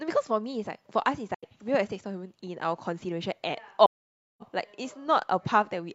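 AAC frame loss with muting at 1.34 s and 3.85 s: the decoder zeroed missing frames, leaving soft-edged silent holes in the speech, about 85 ms and 0.55 s long.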